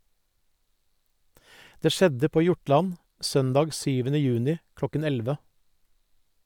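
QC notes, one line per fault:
No technical faults are audible in the speech. Nothing needs flagging for repair.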